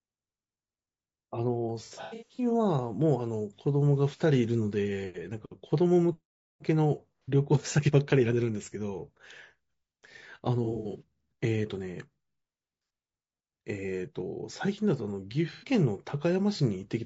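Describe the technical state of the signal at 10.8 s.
AAC frame loss with concealment covers 10.64 to 11.02 s. About 210 ms of audio drops out in short gaps spread over 360 ms, the longest run around 70 ms, which fits roughly seven lost frames. The decoder patches each gap from the last good spectrum, so the speech turns briefly smeared, noisy and phasey rather than going silent.

Low-delay AAC compression also runs through this moment and the rest of the clip. The speech sounds rough and grainy, with noise between the harmonics and a thin, synthetic-sounding top band. This is likely AAC-ELD at a low bitrate, around 32 kbps, whose short frames resolve pitch poorly.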